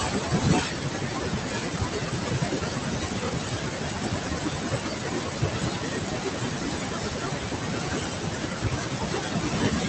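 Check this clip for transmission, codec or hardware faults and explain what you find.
Two processing faults are audible, both from the noise suppressor, and neither comes from the codec or hardware.

Noise suppressor artifacts run throughout: frame-by-frame band attenuation makes the residual room noise pump between phrases.

Speech cut by the noise suppressor, from 0.0 to 9.89 s: the suppressor mistakes quieter speech for noise, pulling it down by as much as about 18 dB, so soft consonants and endings sound swallowed.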